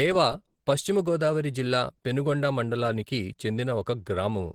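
From start to finish the speech carries plainly audible coding damage, likely Opus compression running in its hybrid mode. At a rate that fits about 16 kbps, the encoder spends its bits on the lower speech band and fills gaps in the upper region by folding lower bands or with noise, so the voice comes across muffled and hoarse, with a grainy, rough edge. The bandwidth stays fullband, with content reaching up to about 20.3 kHz.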